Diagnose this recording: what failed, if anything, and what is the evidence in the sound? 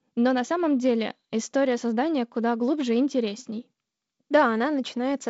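Nothing failed; no stage shows any fault.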